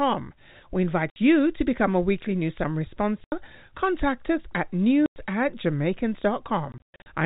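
Telephone-band speech, limited to below 4 kHz as G.711 coding gives, with packet loss filled with silence: hard-edged gaps of 60 ms at 1.1 s before "you to become a", 80 ms at 3.24 s after "a weekly news summary", 100 ms at 5.06 s after "us at", and a scattered cluster from 6.72 to 7.06 s totalling 240 ms, the longest run 120 ms. The 20 ms steps fit lost 20 ms packets replaced by silence.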